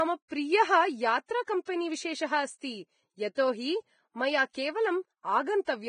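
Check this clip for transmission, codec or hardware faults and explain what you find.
Yes, there are two problems: heavy lossy coding across the whole recording, and four short pre-echoes on sharp onsets.

The coding damage runs throughout the speech. Nothing comes through above 9.7 kHz, and the treble that remains is grainy and hissy, with roughened tones. That's likely Vorbis compression at a low setting, consistent with a bitrate of around 20 kbps. At that rate the encoder drops the top band and quantises what's left so coarsely that fine detail is replaced by noise of roughly the same energy.

Pre-echo shows up at 1.45–1.48 s, 1.65–1.67 s, 3.35–3.37 s and 4.51–4.55 s. Each time, a short hiss runs about 21 to 34 ms ahead of a sharp onset, and the attack itself sounds softened and smeared. It's the transform codec spreading quantisation noise across a whole block: the noise sized for the loud attack leaks into the quiet stretch just before it.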